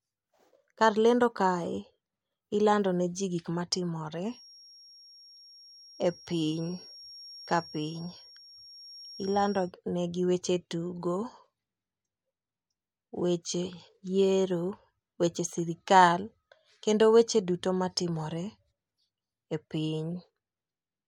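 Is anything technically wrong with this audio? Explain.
Yes. From about 4.22 s to 9.74 s there's a feedback whistle sitting behind the speech, a thin, steady tone at 5.6 kHz, roughly 25 dB under the voice, that swells and fades slowly in level. What you're likely hearing is the loudspeaker-to-mic loop parked right on the edge of feedback: that one frequency keeps ringing around the loop without quite building up into a howl, so it just hangs there until it drops out.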